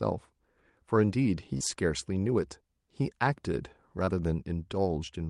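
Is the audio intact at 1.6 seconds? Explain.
No, there is a short concealed packet loss from 1.57 to 1.62 s. A few tens of milliseconds of the call arrived too late for the decoder, and the receiver covered the gap by extending the preceding sound, carrying its pitch forward where it was voiced or substituting shaped noise where it wasn't, before blending back into the real signal. The result is a brief smear or wobble, and a short consonant could drop out.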